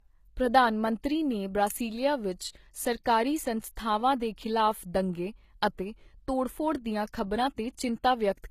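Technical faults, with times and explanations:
Throughout: low-bitrate audio saved at a high bitrate. The speech has nothing above 14.9 kHz. The cut-off and the first codec's artefacts likely survive from a low-bitrate encode later resaved as high-bitrate MP3.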